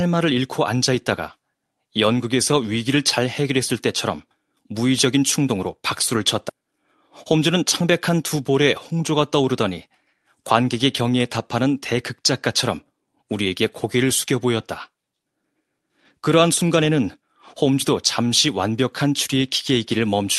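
At 6.49 s the speech skips ahead. Roughly 0.7 s of audio never arrives at the ear, and nothing fills the hole. The sound on either side is butted together with no gap, so the jump is abrupt rather than silent. This is a skip ahead: later audio was already queued, so the dropped stretch was simply bypassed. The delay shrinks by about the same amount at that moment.

From 7.31 to 8.09 s comes a jitter buffer speed-up. Playback runs at about 108% of normal speed. The pitch stays put, but the talker sounds briefly hurried. The receiver is trimming tiny slices, each one or a few pitch periods long, over and over, to drain excess buffered audio. In total about 70 ms is cut. The speech passes through a call codec whose band tops out near 12 kHz, which points to Opus at a moderate bitrate.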